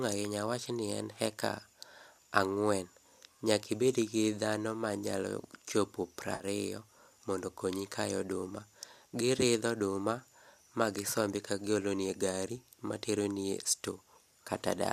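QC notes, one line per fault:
6.35–6.43 s, AAC frame loss with concealment: a brief smeared, noisy patch where about 50 ms of the likely AAC-ELD stream went missing, consistent with roughly five lost frames, and the decoder filled the gap from the last good spectrum. On a spectrogram, harmonics blur into a flat, noisy smear.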